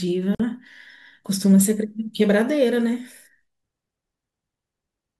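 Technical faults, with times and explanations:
0.35–0.40 s, gap at a join of encoded pieces: the speech drops out for about 49 ms, then resumes exactly where it left off, as if two separately encoded segments were butted together with the encoder's start-up delay and last-frame padding left in. It sounds like a brief hiccup in otherwise continuous speech. On a waveform it shows as a flat, near-zero stretch with sharp edges slightly softened; a spectrogram shows a vertical blank band across all frequencies.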